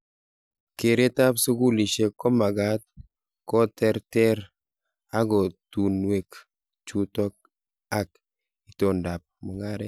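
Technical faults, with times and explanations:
No technical faults can be heard in this speech.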